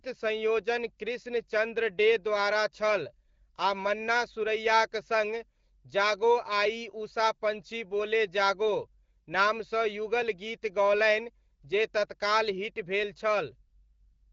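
No technical faults turn up anywhere in this speech recording. It carries the character of AMR wideband (HD Voice) coding at 12.65 kbit/s, a rate at which the codec leaves only light traces on the sound.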